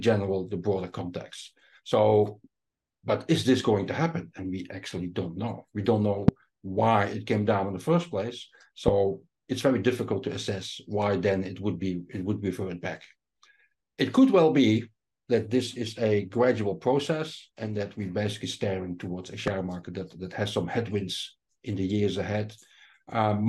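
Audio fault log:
6.28–6.31 s, 8.88–8.90 s, 19.48–19.50 s: loud pop, three single sharp pops about 15 to 20 dB above the signal while the sound continues underneath, likely voltage spikes.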